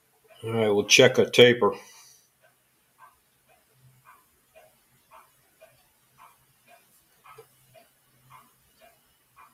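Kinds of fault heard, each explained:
Noise suppressor applied to music or sounds: A noise suppressor built for speech stays active across the whole clip and treats steady, sustained parts of the sound as noise, pulling them down. The gain it applies swings by around 10 dB as it decides what counts as noise. Unlike a compressor, which reacts to overall loudness, this processor responds to how noise-like the content is, so sustained material and tails are what sink.
Sound cut by the noise suppressor: Here the suppressor judges a stretch of the sound to be noise and turns it down more than the rest, by up to about 14 dB. It happens at the very start, from 0.01 to 0.43 s, and again from 1.9 s to the end. Unlike a dropout, the sound is lowered rather than lost, and the reduction follows the content rather than breaking off abruptly.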